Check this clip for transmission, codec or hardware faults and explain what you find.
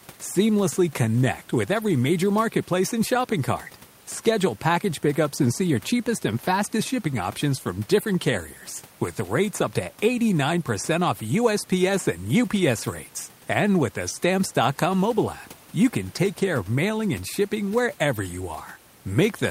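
No transmission, codec or hardware faults are present; the only background is the room noise of the recording space, sitting about 26 dB and about 36 dB below the speech.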